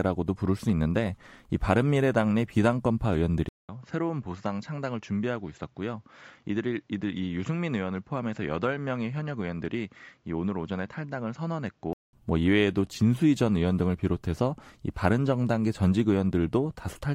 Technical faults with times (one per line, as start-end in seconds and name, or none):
3.49-12.13 input switched to a poorer device